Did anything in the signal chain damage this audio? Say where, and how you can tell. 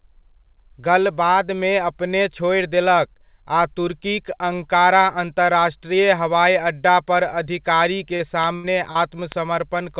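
Yes, in the network stage, right near the end. There's short concealed packet loss at 8.16 s and again at 8.92 s, each a little smear lasting about 60 ms. Around 40 ms of real audio went missing each time, and the receiver papered over it by extending the last sound for roughly 35 ms before crossfading back into the real signal. That's why you hear a wobble instead of a hard gap.

Between those two, at 8.55 to 8.67 s, there's a burst of packet loss. About 80 ms of audio never arrived in time. The decoder kept the previous sound going for about 80 ms and let it die away, so you get that held, fading tail before the audio jumps ahead with the middle gone. The band tops out at 4 kHz, which fits a narrowband G.711 call path, and the losses are heard inside that band.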